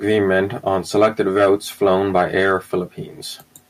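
No technical faults can be heard anywhere in the speech recording; the signal stays intact and continuous throughout.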